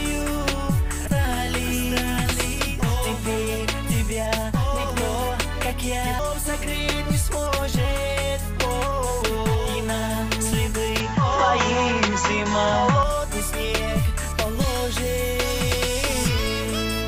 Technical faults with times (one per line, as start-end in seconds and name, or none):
1.07 damaged data in a compressed stream
6.19 damaged data in a compressed stream
11.00-13.03 input switched to a poorer device